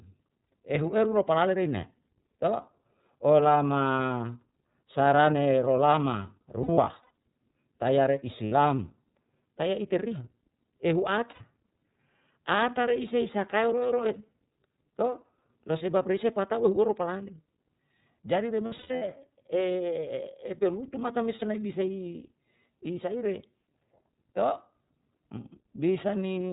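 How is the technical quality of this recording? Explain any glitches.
The recording is plainly degraded by narrowband VoIP coding, with five short patches of packet loss.

iLBC codec, throughout: the speech stops at 4 kHz and has a rough, slightly synthetic edge. That fits roughly 13 kbps iLBC with 30 ms frames. Unlike wideband codecs there is no air above 4 kHz, and the roughness does not smear from one frame into the next.

Lost iLBC frames, at 6.63–7.10 s, 8.46–8.52 s, 11.31–11.42 s, 18.66–19.03 s and 21.36–21.43 s: when packets go missing, the decoder repeats the last pitch cycle mixed with noise. This gives a held, buzzy, breathy vowel rather than silence. The first and fourth events scatter about 240 ms of loss over 540 ms and 360 ms, with runs up to about a tenth of a second. The others are single gaps of 60–90 ms. Clarity returns almost at once, because each frame decodes independently.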